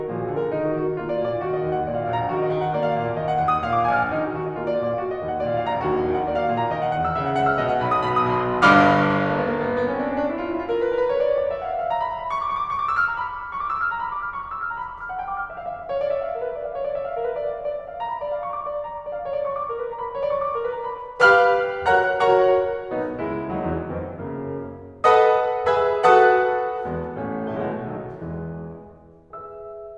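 No technical faults can be heard anywhere in this music.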